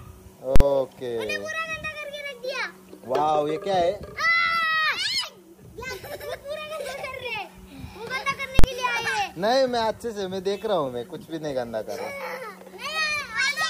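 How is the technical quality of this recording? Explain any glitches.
Two loud glitches mar the recording. At 0.56–0.60 s and 8.59–8.64 s, invalid numbers at full scale: a calculation overflowed, pinning output at maximum for about 46 ms (fits a 2048-sample block), heard as hard pops, unlike clipping's distorted audio.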